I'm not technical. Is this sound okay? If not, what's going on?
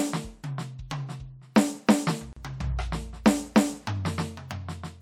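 No. At 2.33 to 2.37 s the music drops out for about 36 ms: a gap at a join of encoded pieces, where separately encoded sections were stitched without trimming their padding silence.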